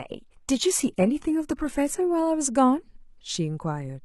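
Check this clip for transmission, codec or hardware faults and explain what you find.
One fault: the speech opens on a low-bitrate version of an adaptive stream. From 0.0 to 2.0 s the treble is missing or synthetic and codec artefacts are stronger, which fits HE-AAC near 16 kbit/s. The player starts low to begin quickly, then, once it has measured the connection, switches to a fuller stream, consistent with AAC-LC near 96 kbit/s. The quality improves abruptly without any gap, and this happens only at the very start. A mid-stream downgrade during congestion would instead degrade later and recover.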